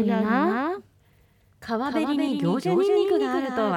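From the start to the end of the speech, a doubled audio track runs under the main signal: a second, full-band copy trails by about a fifth of a second, a few decibels quieter than the original. It carries no reverberant tail or room colouring, so it reads as a distinct slapback rather than ambience. The likely cause is the same source reaching the mix twice, once through a slower capture path.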